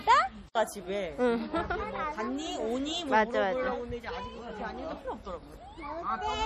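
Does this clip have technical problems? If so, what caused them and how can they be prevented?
Yes. Throughout the clip the audio has a watery, swirling quality, with faint components flickering in and out and nothing at all above about 14.6 kHz. This is likely MP3 compression at a starved bitrate, consistent with something near 40 kbps. The encoder drops the treble at a fixed cut-off and zeroes quiet frequency lines frame by frame. The hard ceiling and the frame-rate flicker set it apart from an ordinary low-pass filter or broadband noise. Encoding at a higher bitrate, or in a lossless format, prevents it.

From 0.52 to 0.55 s a sharp attack is preceded by about 30 ms of hiss, and the attack itself sounds softened. This is pre-echo. The codec spreads quantisation noise across its whole transform block, so the noise scaled for the loud onset also fills the quiet moment just before it. Because the hiss arrives before the attack rather than after it, it cannot be reverb or a decaying tail. 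A higher bitrate, or an encoder that switches to short blocks on transients, prevents it.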